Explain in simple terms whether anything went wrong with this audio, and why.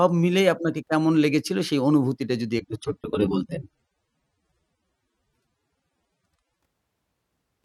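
Something did go wrong: from about 2.59 s to 6.59 s the speech switches to an adaptive stream at a lower bitrate. The connection slowed, so the player swapped to a leaner copy. The sound picks up more compression artefacts, then snaps back, with no gap either way.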